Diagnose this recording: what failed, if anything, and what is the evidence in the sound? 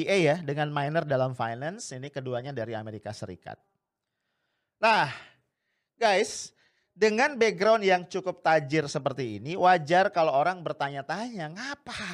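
Nothing failed: there is no evidence in the sound of any fault in this recording.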